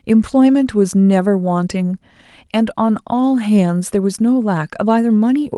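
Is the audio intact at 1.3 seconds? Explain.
Yes, the speech at 1.3 seconds is intact, with only the ordinary coding character and the top cut at about 12 kHz that come from passing through a call codec.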